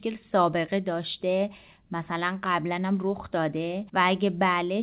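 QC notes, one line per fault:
No faults to log here; the speech simply comes through a normal WebRTC call path on G.711 mu-law at 64 kbps, so nothing sits above 4 kHz, just as that codec intends.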